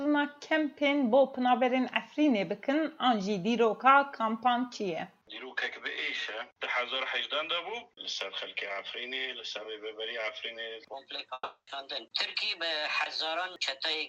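From 10.93 s to the end, the audio runs at the wrong speed. It plays 1.2 times too fast, about three semitones sharp, likely from a clock mismatch in editing or playback. At 11.33 s a long network dropout begins, lasting until 11.69 s. A fading buzz or hiss covers the gap, then brief silence, and about 0.34 s of sound is lost, likely from packets that never arrived.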